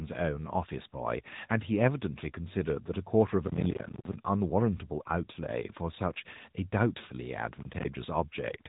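Throughout, the speech carries AMR narrowband mobile codec damage: nothing passes above 3.8 kHz, and the plainly buzzy, synthetic quality fits a mid-rate AMR-NB mode near 10 kbps. From 3.48 to 4.15 s, and again from 7.60 to 7.85 s, processor overload crackle appears: runs of missed buffers of around 10 ms drop out to silence, producing gritty tearing.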